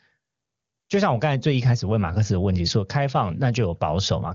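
No technical faults can be heard in this signal, whose bandwidth of about 7 kHz fits AMR wideband (HD Voice) coding at its highest rate.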